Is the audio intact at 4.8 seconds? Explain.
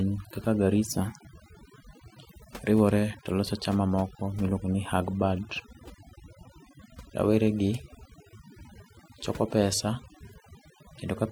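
No. At 4.8 seconds, as throughout the clip, overdone noise removal is at work: the noise reduction was set too strong, so it drives frequency bands near its noise estimate far down or off, taking quiet parts of the speech with them. The background drops and breaks up into twinkling specks.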